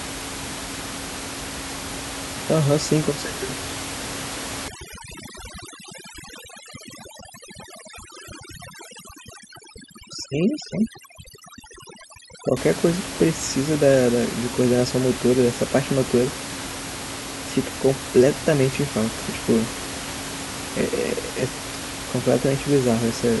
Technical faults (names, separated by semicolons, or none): overdone noise removal